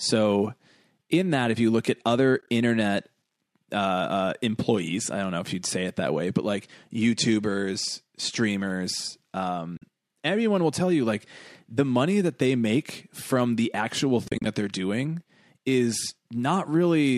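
AAC frame loss with muting leaves soft gaps at 2.38–2.50 s after "you look at other", 9.77–9.82 s before "everyone will tell you", and 14.28–14.46 s after "make from the actual". The decoder zeroed the lost frames and faded across them, so each gap shows as blank vertical strips on a spectrogram and as tapered dips in the waveform.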